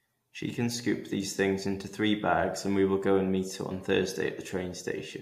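No technical faults can be heard anywhere in the speech recording.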